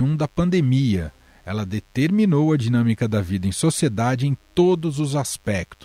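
From start to finish there's a DECT cordless phone buzz, a thin, steady 100 Hz rasp sitting well below the speech, from a nearby handset's bursts getting rectified by the audio circuit.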